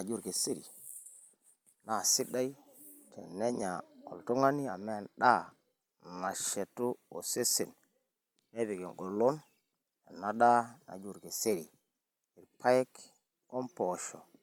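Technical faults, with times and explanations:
No technical faults can be heard anywhere in the speech; the signal stays continuous and steady across the whole recording.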